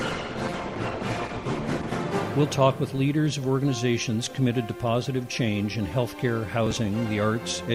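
From 0.0 to 2.0 s the audio plays through an adaptive stream starting at a low bitrate. The player begins on a lean encoding so playback can start without delay, then switches to a richer version once it has gauged the connection. During those first two seconds the treble is dull or synthetic and the coding artefacts are stronger. At 2.0 s the quality steps up abruptly with no gap, which fits a move from about 16 kbit/s Opus to about 64 kbit/s.

From 6.66 to 6.77 s there is processor overload crackle, a short burst of gritty tearing over the sound. The processor fell behind and failed to deliver several small buffers on time. Each late buffer was skipped outright rather than filled, so each one leaves a tiny hard-edged gap. The spacing of the clicks points to buffers of around 5 ms, with roughly seven missed over that stretch before the load eased and the crackle stopped.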